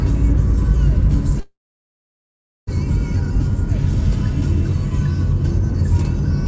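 At 1.40 s the sound stalls, and it doesn't pick up again until 2.69 s. That's a call audio freeze, most likely packets held up in transit so the jitter buffer ran dry. The receiver stretched out the last bit of sound, which dies away into about 1.14 s of silence, and then the audio carries on right where it left off. Nothing is lost, but everything after it lands about 1.27 s late. Through all this the band stays capped at 8 kHz, as the G.722 call path would give.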